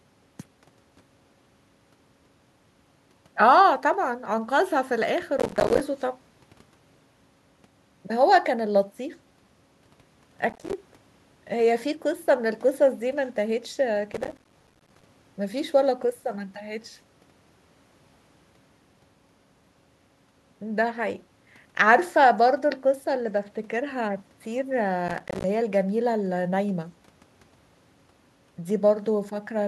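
Processor overload crackle breaks up the speech at 5.38–5.80 s, 10.49–10.73 s, 14.12–15.06 s and 25.08–25.44 s. The processor repeatedly misses deadlines on buffers of roughly 5 ms, and each miss drops to silence. The result is gritty tearing, seen as dense broadband vertical streaks and rapid waveform gaps.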